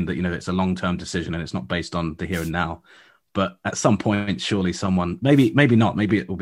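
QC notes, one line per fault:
2.32–2.51 s and 5.33–5.49 s, wireless microphone noise hit: the analogue FM radio link fades as reflected signals cancel, so receiver noise surges, heard as a brief static burst after "not based on the" and again after "some point surely someone".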